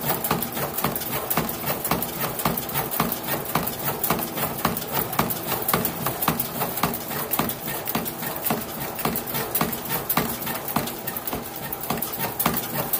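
Nothing technically wrong can be heard in this audio. There is no moment in it that needs a time or a cause.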